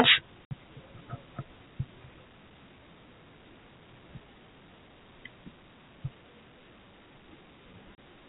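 Packets carrying the speech went missing in transit, and the receiver played silence in their place each time, which is packet loss filled with silence. At 0.47 to 0.51 s about 60 ms vanishes, consistent with two 30 ms packets, and at 7.96 s a further 30 ms drops, pointing to one packet. Each gap is a dead hole with abrupt edges, over the narrow, 4 kHz-limited telephone sound of G.711.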